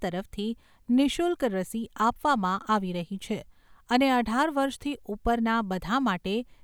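Nothing to flag: no audible technical fault anywhere in the speech.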